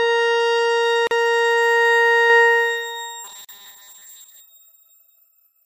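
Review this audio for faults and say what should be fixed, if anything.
A gap at a join of encoded pieces appears twice: 1.07 to 1.11 s (40 ms) and 3.45 to 3.49 s (41 ms). Separately encoded pieces were spliced without trimming encoder delay and padding. Prevent it by encoding continuously or trimming each piece's priming and padding before joining.

A doubled audio track runs from 2.30 s to the end: a dry copy about 5 dB quieter trails roughly 200 ms behind, likely from a second capture path. Prevent it by routing each source through one capture path only.

Robotic sound from repeated short buffers runs from 3.24 to 4.40 s, a rigid 200 Hz buzz consistent with a 5 ms block likely replayed in place of most incoming audio. Prevent it by enlarging buffers or fixing the underrunning input.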